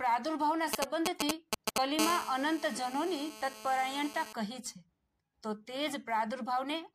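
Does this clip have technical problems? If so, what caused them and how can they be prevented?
Yes. Sample clock jitter runs throughout: an unstable converter clock, wandering by a few microseconds, mistimes samples, adding roughness that grows with loud, bright passages. Use a stable, low-jitter clock source.

GSM signalling bursts, 0.73 to 1.78 s: a nearby 2G phone's short radio bursts, rectified by the audio circuit, give galloping ticks and 217 Hz buzzes louder than the sound itself. Keep phones away or switched to flight mode.

GSM phone buzz, 1.99 to 4.33 s: the phone, now in a call, transmits 217 times per second, producing a steady, raspy harmonic buzz at about -9 dB. Shielded cabling and distance from phones prevent it.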